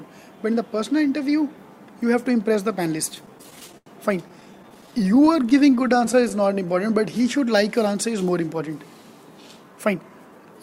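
From 3.09 to 3.88 s and again from 4.28 to 6.32 s, repeated stalls (stutter) occur as late packets empty the jitter buffer, 12 then 35 times. The receiver extends the last sound, up to 88 ms in the first run, and these appear as repeated waveform cycles and held, smeared spectrogram bands.

A jitter buffer slow-down from 5.99 to 7.64 s repeats pitch periods to rebuild the reserve, adding 120 ms. The audio plays at 93% speed, with stretched spectrogram features at unchanged pitch.

A jitter buffer speed-up from 9.49 s to the end trims pitch periods, removing around 150 ms. At 110% speed it sounds hurried, and the spectrogram looks compressed in time.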